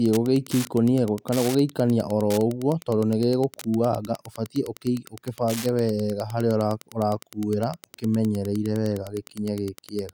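A steady, faint ticking runs beneath the speech from start to finish, close to ten clicks a second and sitting roughly 20 dB below the voice. This is Wi-Fi interference: a wireless radio near the audio circuitry transmits a beacon every 102.4 ms, and the circuit rectifies those radio bursts into the audible band. Each beacon becomes a small click, and because they repeat so regularly, the result is an even, mechanical tick under the speech.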